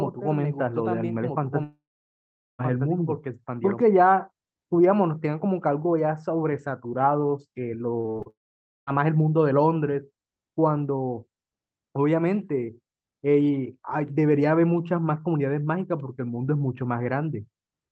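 From the very start, the speech is heard twice. A second full-band copy runs about 1.5 s behind the first, roughly 5 dB quieter. It is a doubled audio track, likely from the same signal being captured again through a slower path. The copy has no room colour or decay. It sounds like a flat, dry echo of earlier phrases. It is already playing when the clip begins and cuts off abruptly at 3.81 s.

At 1.63 s, inside that doubled stretch, the sound breaks off. This is a long network dropout, likely a stall in packet delivery. The last sound is stretched into a short fading buzz, then about 0.8 s of silence follows. Sound resumes at 2.61 s. Nearly a second of speech is simply gone.

From 8.01 to 8.28 s, packets go missing again and again. This is repeated packet loss. There are five small holes, the longest about 45 ms. Each one is patched by extending the previous sound. More than half of this short span is filled this way. 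The speech turns choppy, with pieces missing.

A second long network dropout follows straight after, from 8.30 to 8.89 s. A brief fading fill gives way to roughly half a second of silence. About 0.58 s of audio never returns. The whole clip also carries Opus coding noise from the call path, with nothing above 8 kHz. That fits a bitrate around 32 kbps.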